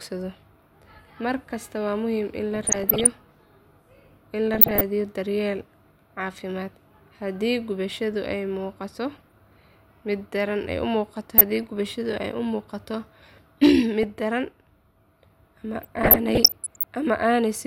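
Weak DAB reception lets bit errors, around 0.3 to 0.5 percent, slip past error correction into the MP2 data, so single sub-bands jump in level frame by frame. The result is DAB burbling: blips of noise in single sub-bands over the speech at 2.55–3.22 s, 4.53–4.81 s, 9.13–9.31 s and 11.38–11.63 s. At 13.63–13.75 s, a stage overdriven by about 3 dB flattens the peaks. This hard clipping adds high harmonics, heard as a brief crackle on the peaks. Burbling returns at 13.98–14.10 s and at 15.82–16.83 s, the longest stretch.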